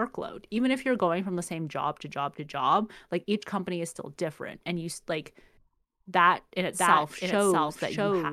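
A speech clip with a doubled audio track. At 6.72 s, just after "that in", a second copy of the speech cuts in abruptly and runs to the end. It trails the original by about 0.7 s and sits about 5 dB lower. It is full-band, with no decay or room colour, so it is not an echo. The likely cause is the same signal captured again through a slower path.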